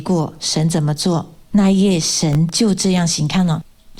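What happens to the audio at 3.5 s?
Nothing goes wrong at 3.5 s; the audio there plays through intact, with no dropout, glitch or other fault to be heard.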